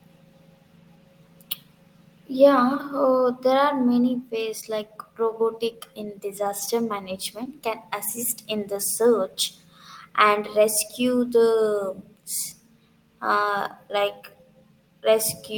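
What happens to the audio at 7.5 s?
A brief smear in the speech, heard as a wobble lasting well under a tenth of a second, runs from about 7.43 to 7.47 s. This is short concealed packet loss: roughly 20 ms of the stream failed to arrive in time, so the receiver bridged the gap by extending the preceding sound for about 20 ms, following its pitch where voiced or substituting shaped noise where not, then crossfaded back into the genuine audio.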